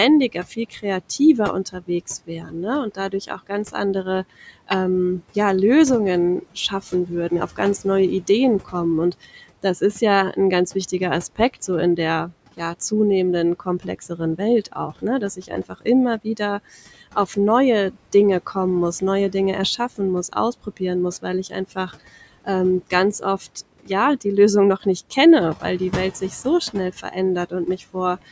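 Noise suppressor artifacts run through the whole speech clip: the suppressor pulls the steady background down by about 18 dB, so the room noise dips between phrases. Speech cut by the noise suppressor occurs at 0.32–4.7 s, 6.42–10.37 s, 10.92–12.92 s, 13.6–17.37 s, 17.91–21.9 s, 22.45–24.25 s and 24.82–28.23 s. Quiet consonants and word endings are mistaken for noise and dropped by about 12 to 18 dB, sounding swallowed for brief stretches within each span.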